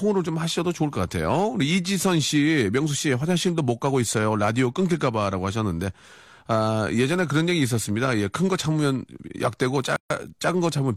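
At 9.96 s the speech drops out for about 140 ms, resuming at 10.10 s exactly where it left off. This is a gap at a join of encoded pieces: two separately encoded segments were butted together untrimmed, so one's padded final frame and the next's leading encoder delay both survive as silence. On a waveform it appears as a flat stretch; a spectrogram shows a clean blank column, its borders smeared by the codec.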